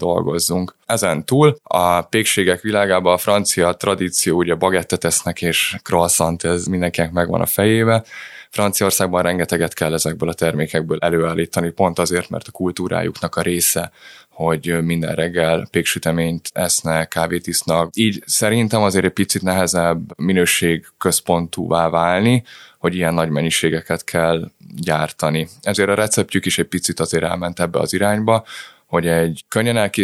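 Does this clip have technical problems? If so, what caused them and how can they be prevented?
No audible technical faults.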